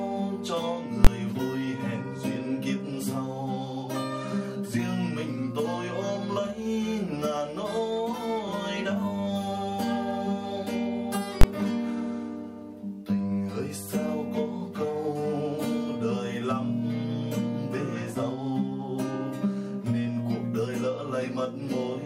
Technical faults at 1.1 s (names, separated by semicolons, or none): invalid numbers at full scale